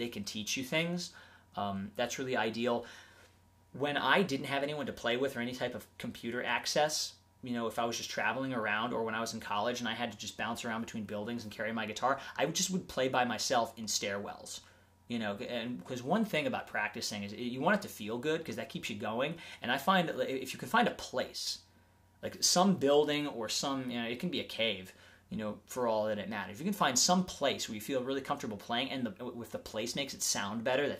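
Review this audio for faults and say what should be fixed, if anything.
One channel drops out from 21.34 to 21.47 s, a dip of about 130 ms in which the overall level falls abruptly by about 6 dB and then snaps back. The likely cause is one side of the stereo pair going silent for that moment: once the channels are summed to mono, material shared by both loses half its contribution, and anything present only in the missing side vanishes entirely. To prevent it, secure the cabling and input on both channels and monitor each side separately while recording.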